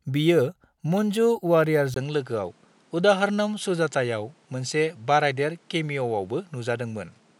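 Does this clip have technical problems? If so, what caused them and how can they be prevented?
Yes. At 1.94 s there's a 20 ms gap, and from there to the end the speech sounds duller: nothing comes through above 11.2 kHz, and a faint new background noise sits well under the speech, with no real jump in level. That pattern points to an input switched to a poorer device mid-recording, likely a different mic or a headset profile taking over. To prevent it, lock the input device in the OS and the app before recording.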